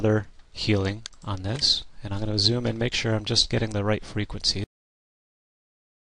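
At 4.64 s the audio hits a cut-off end: the final buffers were never written, so sound stops abruptly into digital silence with no decay and never resumes, unlike a mid-clip dropout.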